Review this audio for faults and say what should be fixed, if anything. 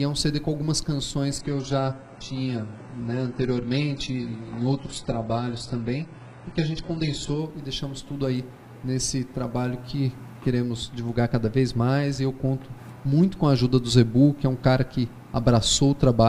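From 1.39 to 7.39 s the adaptive stream drops to a lower bitrate. The treble suddenly vanishes above about 11.1 kHz and turns thin, which fits a low-bitrate HE-AAC rendition, then snaps back with no gap. To prevent it, give the player more buffer headroom or set a higher minimum rendition.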